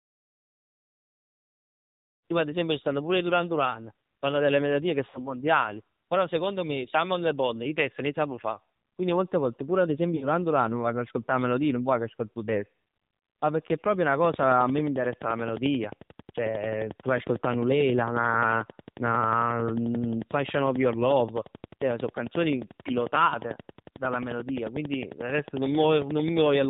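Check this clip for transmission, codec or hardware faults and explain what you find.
Three things stand out in this speech recording: codec damage throughout, two dropouts, and a late run of clicks. The fade-in around 2 to 2.3 s is just an editing fade.

AMR narrowband mobile codec: Across the whole clip, AMR-NB at 7.4 kbps cuts everything above 4 kHz and models the voice sparsely, so it sounds buzzy, muffled and synthetic.

Lost AMR speech frames: At 5.10 to 5.36 s and 10.16 to 10.28 s, the decoder patches over 40 ms and then 60 ms of lost frames. It repeats the last good settings at falling level, so the voice smears, warbles, dips and returns a bit rough.

Train of clicks: From 14.24 s to 26.65 s there's steady ticking, around 150 near-identical pops at about 11.2 per second, peaking about 10 dB above the speech. The likely source is electrical interference or a faulty connection.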